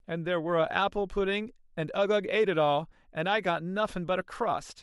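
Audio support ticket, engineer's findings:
No faults found in this speech clip; nothing to attribute to any component.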